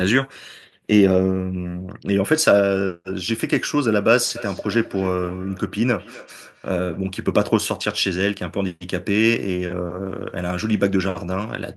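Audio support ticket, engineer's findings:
Ringing repeats of the speech, 4.36–7.13 s, about every 0.3 s, thinner each pass, peaking about 19 dB below the talker. Feedback echo between two devices: a second device's output reaches this mic, outside the local echo canceller's reach.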